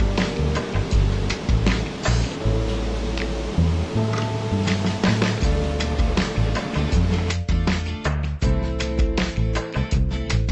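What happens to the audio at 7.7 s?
Nothing goes wrong at 7.7 s; the audio runs through that moment intact, with no dropout, click, distortion or other fault.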